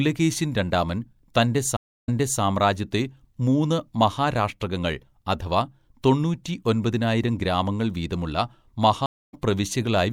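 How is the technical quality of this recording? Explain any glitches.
The speech has two stream reconnect dropouts. At 1.77 s the link drops: about 0.31 s of silence, then the player restarts a fresh decoder and resumes about 0.34 s earlier, repeating a bit. At 9.06 s there's about 0.27 s of silence, and it picks up slightly later, skipping a sliver.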